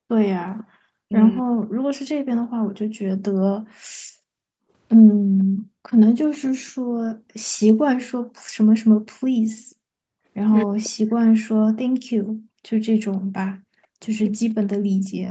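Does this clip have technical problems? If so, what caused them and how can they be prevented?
Yes. Three kinds of echo-canceller fault are audible.

Background gated by the echo canceller: from 0.0 to 0.77 s, 2.42 to 10.28 s and 12.21 to 15.13 s, the room sound dips by about 40 dB. The canceller clamps the microphone while the loudspeaker plays. The drops add up to roughly three seconds. Gentler suppression with a smooth comfort-noise fill would prevent this.

Echo leak: from 0.58 to 1.66 s and 5.39 to 6.71 s, a faint delayed copy of the voice trails by about 0.49 s, roughly 25 dB below the speech. The likely cause is a loudspeaker-side canceller that failed to remove all of its microphone pickup. Better canceller convergence, or headphones on that side, would prevent it.

Speech suppressed in double talk: from 1.05 to 1.13 s and 10.94 to 11.25 s, the talker's voice dips sharply, by roughly 40 dB. 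This likely happened because both sides spoke at once and the canceller suppressed everything. A canceller with proper double-talk detection would prevent this.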